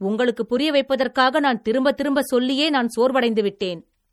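Throughout the speech, the sound has a watery, swirling quality, with chirpy metallic edges on s sounds and smeared attacks, and nothing is present above 18.2 kHz. This is likely MP3 compression, and the damage is plainly audible, which points to a low bitrate in the region of 48 kbps. Short of bits, the encoder cuts the treble at a fixed frequency and drops weak spectral lines that then flicker in and out from frame to frame.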